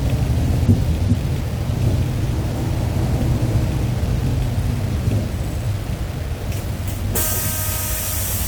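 From start to end the sound is grainy, with distortion tracking the signal. This is likely low bit depth without dither: about 6 bits, rounded.

At 2.33 s a skip ahead occurs. Roughly 0.7 s of audio is dropped, and playback jumps forward with no gap filled.

From 3.39 to 4.83 s, a jitter buffer speed-up runs the sound 4% fast at unchanged pitch, trimming roughly 70 ms in short pieces.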